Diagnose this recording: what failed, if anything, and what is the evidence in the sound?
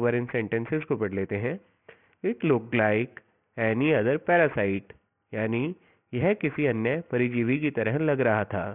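Aliasing runs through the whole clip, introduced at the sample-format conversion stage. The spectrum stops hard at 3 kHz, which fits a downsample from 44.1 kHz to about 6 kHz with no anti-alias filter. Content above 3 kHz folds back below it as gritty, metallic tones unrelated to the source, roughly 20 dB under the signal. A properly filtered rate drop would only sound dull; these added wrong pitches identify aliasing.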